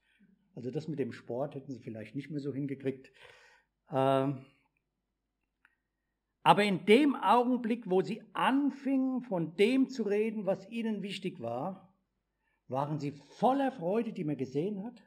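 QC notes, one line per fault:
Throughout, imaging from linear upsampling: the top of the band is dulled, and a faint mirrored copy of the spectrum sits between 6 kHz and 12 kHz, around 35 dB below the signal, heard as a light metallic shimmer on bright, high-frequency sound. Joining samples with straight lines filters the spectral images only weakly, so they survive. This fits a 12 kHz sample rate raised to 44.1 kHz.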